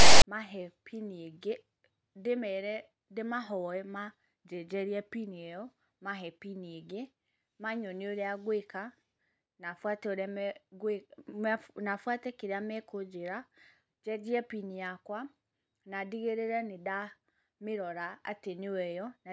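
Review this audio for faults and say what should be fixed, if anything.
The speech opens with a harsh, hard-edged rasp from 0.0 to 0.23 s, dropping to silence before the speech begins. This is file tags played as audio: a text tag block and its zero padding were decoded as samples, giving a lopsided buzz then nothing. To prevent it, have the reader skip metadata chunks and start decoding only at the real audio data.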